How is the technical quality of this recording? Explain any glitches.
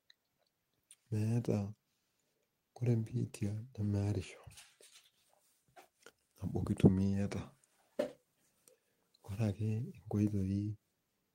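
Nothing here stands out as a glitch, so there's really no technical problem in this recording to explain.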